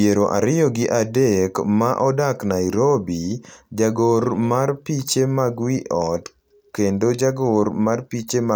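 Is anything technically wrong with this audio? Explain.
No, nothing is technically wrong with this audio.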